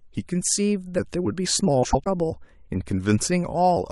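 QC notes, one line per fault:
1.83–2.07 s, frames out of order: a brief garbled flutter, because two adjacent runs of about 105 ms each, which fits four codec frames apiece, play in swapped order. The stretch is exchanged, not shortened, so no time is lost.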